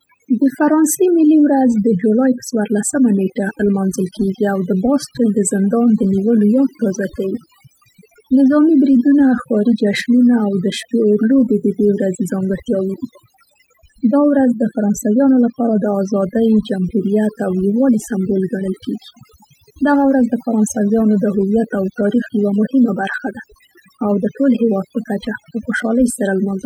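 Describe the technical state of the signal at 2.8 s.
At 2.8 s the clip is under overdone noise removal, which runs throughout the whole recording rather than starting or stopping near this point. A noise reduction stage set far too aggressively is pulling individual frequency bands down or cutting them out whenever their level sits close to its noise estimate, and the softer parts of the speech fall below that threshold too. The background drops and breaks up into twinkling, chirpy specks.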